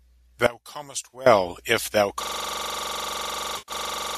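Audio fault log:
0.46–1.26 s, one channel inverted: the speech drops by about 18 dB to a faint copy, then returns at full body after 1.26 s. The likely cause is one stereo channel with reversed polarity, so the shared centre content cancels when the channels are summed and only their small difference remains. On a waveform this is a sudden low-amplitude stretch. A spectrogram shows the whole band faded across that span.
1.13 s and 3.58–3.72 s, AAC frame loss with concealment: at 1.13 s there is a brief smeared, phasey blip. From 3.58 to 3.72 s a longer patch sounds washed-out and noisy, and its level sags before recovering. The decoder is covering missing frames by reusing the last good spectrum with randomised phase. The short gap fits about three lost frames and the long one about ten, and the longer gap lets the fill fade. A spectrogram shows harmonics blurring into flat, noise-like smears. 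The waveform shows a soft dip in the envelope on the longer one.
2.23 s to the end, system hang loop: from 2.23 s the audio locks into one 42.67 ms fragment repeating exactly, about 46 times, at 23.4 Hz. This gives a rough, buzzy machine-gun stutter that never resolves before the clip ends. The host seems to have frozen while the audio hardware kept replaying its ring buffer, which fits a 2048-sample buffer. The waveform shows an identical block tiled over and over. A spectrogram shows rigid vertical stripes spaced evenly, with no harmonic movement.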